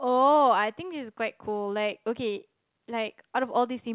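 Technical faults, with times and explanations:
No technical faults can be heard in the speech, so there are no times or explanations to give.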